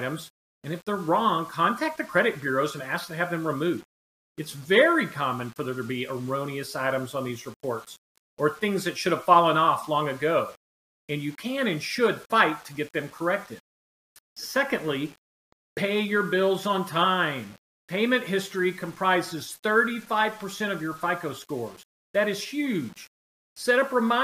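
From start to finish, a grainy distortion clings to the sound and changes as it changes. The quiet passages turn gritty. The faintest moments sputter or drop to near silence. The error sits roughly 30 dB below the signal. This is low bit depth without dither, likely from rounding to about 8 bits. With no dither, the rounding error follows the waveform, so it is heard as distortion on quiet sounds, or as near-steady hiss where the sound is dense.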